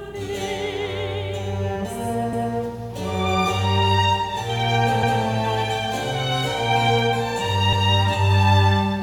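Overlapping chunks split this music into 2.5 s blocks, each starting 200 ms before the previous one ended. The overlapped 200 ms plays twice, giving a stutter with a click at 2.33–2.53 s, 5.03–5.23 s and 7.73–7.93 s.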